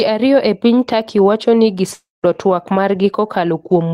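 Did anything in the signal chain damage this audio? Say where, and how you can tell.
Yes. At the network stage, just after "wacho ni", from 1.93 to 2.26 s, the speech dissolves into a decaying buzz, then about 190 ms of near-silence, and resumes with roughly 300 ms lost: a long network dropout, likely from missing packets. A spectrogram shows a smeared, fading band, then a blank gap.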